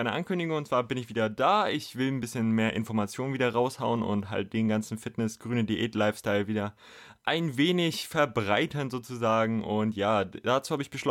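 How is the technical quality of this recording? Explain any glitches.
The recording's signal holds steady throughout, with no glitches of any kind to report.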